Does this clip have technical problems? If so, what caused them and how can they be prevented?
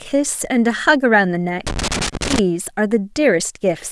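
Yes. From 1.67 to 2.39 s the speech breaks into an irregular burst of scratchy crackle: loose connector crackle, where a worn or dirty contact rapidly makes and breaks as it shifts, chopping the signal into fragments. Cleaning or replacing the connector and securing the cable against movement would prevent it.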